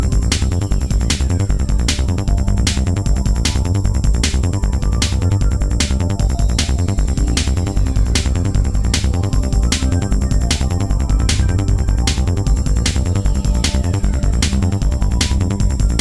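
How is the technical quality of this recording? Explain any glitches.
Nothing here trips me up; there are no glitches to explain, just steady, untroubled audio all the way through.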